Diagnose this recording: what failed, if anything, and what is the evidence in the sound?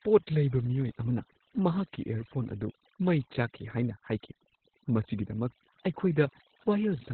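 Overdone noise removal in the call-processing stage, heard across the whole speech clip. The suppressor was set far too aggressive: any frequency band that came close to its noise estimate was pulled hard down or switched off, and the quieter parts of the voice went with it. Between phrases the background collapses to near silence dotted with twinkling specks.

Opus voice compression at the codec stage, also present throughout. The encoder ran in its SILK linear-prediction mode at narrowband, and the sound points to a bitrate of about 8 kbps. Nothing survives above 4.4 kHz, so the voice is muffled and dull, and the coarse coding of the excitation signal adds a hoarse, slightly robotic edge. The damage is heavy.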